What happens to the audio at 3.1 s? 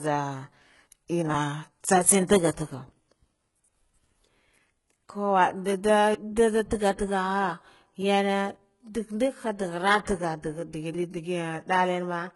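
At 3.1 s you're hearing the same damage that runs through the whole clip, most likely HE-AAC compression. Nothing in the speech reaches above 11.4 kHz, and the top end sounds pasted on rather than real. That's spectral band replication: lower bands get copied upward and loosely shaped, so the harmonics up there don't match the ones below. The s sounds come out gritty, metallic or lispy, and the codec damage is heavy, which points to a very low bitrate, something like 12 kbps.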